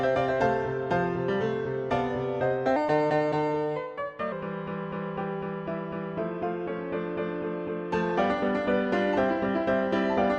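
From 2.76 s to 4.32 s there is a section at the wrong speed: the audio runs 1.15 times too fast, so tempo and pitch rise together by about two semitones, sounding hurried and higher. This is likely playback or editing on a mismatched clock.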